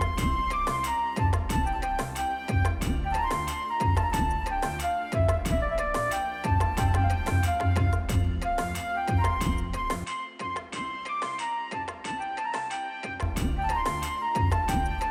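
From 10.04 to 13.23 s, nothing above 9.4 kHz remains, the level dips slightly and faint new noise appears: likely an input switched to a poorer device, not filtering.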